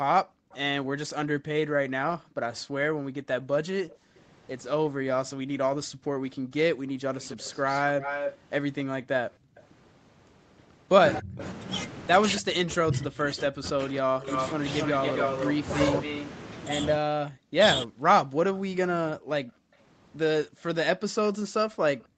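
It's a speech recording from a call, topping out around 8 kHz, and it's got echo canceller trouble throughout. Between 0.24 and 9.55 s the background is gated by the echo canceller: the room tone keeps ducking, by as much as about 37 dB, for roughly two seconds in total, as the canceller clamps the mic while the far end plays. The same gating returns from 19.18 s to the end, with dips of about 40 dB. There's also an echo leak, a copy of the speech trailing 274 ms behind, likely from a loudspeaker on one side whose canceller didn't fully remove the pickup. It's faint at 0.51 s (about 30 dB down), a bit louder from 3.9 to 4.2 s (about 25 dB down), and from 7.21 s onward it sits only about 5 dB under the main speech. Between 11.2 and 18.06 s the talker is suppressed in double talk, dropping by up to about 40 dB for around three seconds in total. That's likely the canceller failing to separate the talker from the echo when both sides speak at once, so it pulls everything down.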